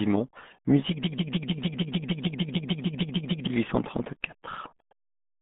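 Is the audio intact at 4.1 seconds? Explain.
No. RealAudio 14.4 codec damage runs throughout, including 4.1 s. Nothing above 3.7 kHz survives, which fits an 8 kbit/s dial-up codec. Speech sounds heavily muffled and gargly.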